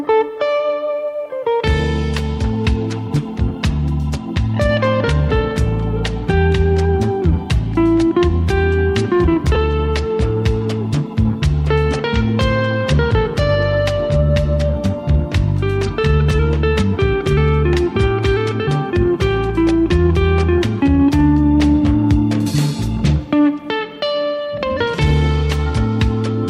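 At 9.55 s there are lost LE Audio frames. A gap of about 10 ms, which fits a single LC3 frame, was concealed. The decoder refilled it with the previous spectrum under random signs. That turns tones into a brief noisy smear.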